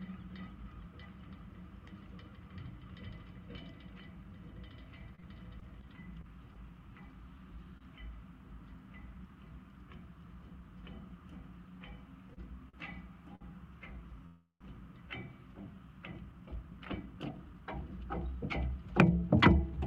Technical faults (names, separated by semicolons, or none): repeated packet loss (robotic sound); short stall from a late packet; repeated stalls (stutter); call audio freeze; jitter buffer speed-up